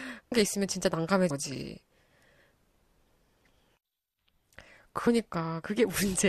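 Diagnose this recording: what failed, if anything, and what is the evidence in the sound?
The failure is at the codec or storage stage: compressed frames skipped. The speech jumps forward abruptly at 0.31 s, 1.30 s and 5.07 s, losing about 300 ms, 200 ms and 100 ms of audio. The codec uses 24 ms frames. Runs of compressed frames were either missing from the file or rejected by the decoder as corrupt.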